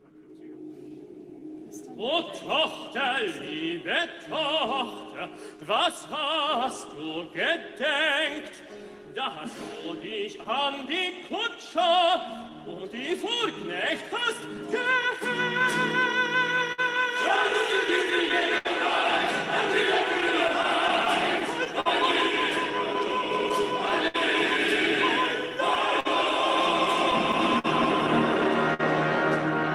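Small hiccups and a faintly uneven pace run through the whole clip. This is clock drift between sender and receiver: the sender's clock runs roughly 4% slow, so the receiver's buffer keeps draining and must be topped up again and again.

From 0.02 s to 25.5 s the tempo feels slightly dragged and unsteady, with repeated minor stumbles. These are repeated timing corrections. The receiver stretches playback to about 97% speed by repeating short pieces, adding somewhere around 0.7 s overall, always in the same direction.

Between 15.59 s and 28.81 s, about thirty brief ticks and smears appear, scattered unevenly, the longest near 70 ms. These are scattered short gaps from lost or late packets. Each hole was patched by extending the preceding sound, together about half a second.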